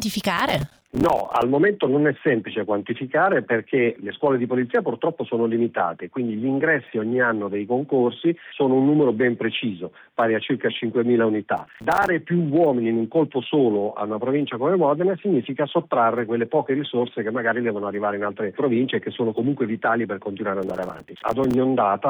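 Processor overload crackle hits at 0.37 to 1.42 s, 11.57 to 12.08 s and 20.63 to 21.54 s. Buffer deadlines are missed in quick runs. Each miss leaves a brief silent gap, fitting buffers of about 5 ms. The gaps merge into gritty crackle.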